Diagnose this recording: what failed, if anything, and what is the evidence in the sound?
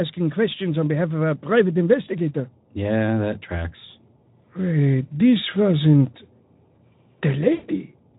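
The failure is at the network stage: VoIP packet loss concealed by the speech codec. At 7.53 s the speech stops sounding natural and turns into a stretched, buzzy tone or coloured noise that fades until 7.70 s. Roughly 100 ms of audio went missing, which fits about five lost 20 ms frames. The decoder filled the gap by repeating its last pitch and filter with falling gain. The concealment runs into the last half-second of the recording. The light Speex codec coloring elsewhere is ordinary for that codec.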